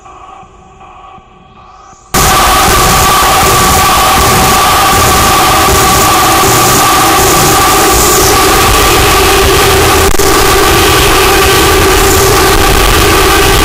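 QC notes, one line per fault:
2.14–13.64 s, signed and unsigned mixed up: from 2.14 s to the end the audio turns into very loud, harsh distortion, and the quiet stretches come out as loud as everything else. That's most likely the sample format being misread, with signed data taken as unsigned or the reverse, which fits 16-bit samples. Flipping the top bit makes every zero crossing jump across the full range, so even near-silence becomes a loud rasp.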